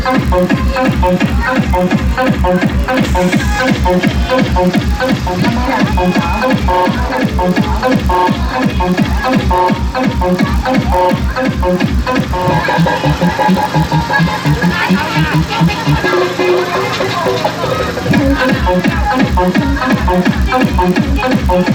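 Throughout the clip, a block size mismatch (padded) leaves each block a little short, its remainder filled with zeros, which fits a 1024-sample read size. Those tiny gaps produce a steady 46.9 Hz buzz, and the audio runs 0.999 times normal speed, with its timbre intact.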